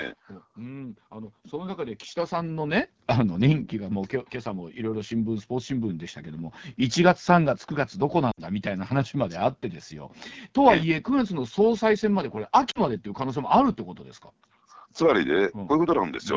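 Throughout, the AMR wideband (HD Voice) codec sounds rough and raspy, which fits its low 8.85 kbit/s mode; a spectrogram shows smeared harmonics and noise-filled content above 6.4 kHz. From 0.57 to 6.65 s, automatic gain rising lifts voice and background together by about 13 dB, seen as a waveform envelope swelling steadily. At 8.31 s, lost AMR speech frames leave about 60 ms where the sound quickly drops to near silence, fitting three missing frames. At 12.71 s, about 40 ms more fades out, briefly thinning the waveform and blurring the spectrogram.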